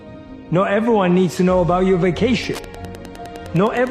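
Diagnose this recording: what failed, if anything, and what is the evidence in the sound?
Wi-Fi interference in the analogue wiring begins at 2.35 s and runs to the end of the recording. A nearby Wi-Fi radio's beacon, repeating every 102.4 ms, is being picked up and rectified by the analogue circuit, producing a steady ticking about ten times a second, roughly 20 dB below the wanted sound. On a spectrogram it appears as thin, evenly spaced broadband vertical lines; the waveform shows a regular train of small spikes.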